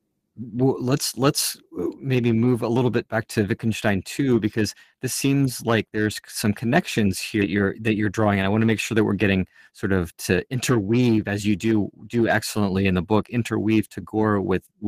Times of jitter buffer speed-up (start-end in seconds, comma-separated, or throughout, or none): 7.55-8.46, 9.38-10.78